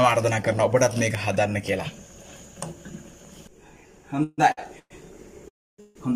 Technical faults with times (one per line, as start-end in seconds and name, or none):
4.23-4.40 call audio freeze
4.52-4.59 short stall from a late packet
4.79-4.92 call audio freeze
5.48-5.97 call audio freeze